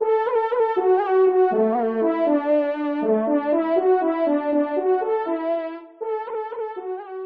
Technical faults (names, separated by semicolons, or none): adaptive stream at a lower bitrate